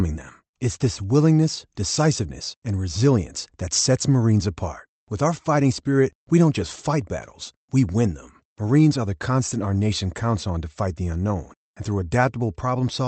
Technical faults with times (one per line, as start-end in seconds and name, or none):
none